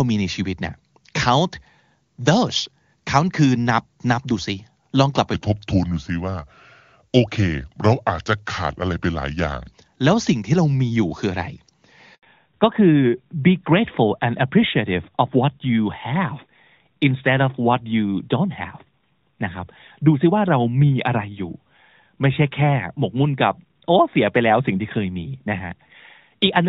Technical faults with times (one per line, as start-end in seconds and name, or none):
5.34-9.72 section at the wrong speed
12.15-12.23 handover gap
12.23-26.69 fallback to narrowband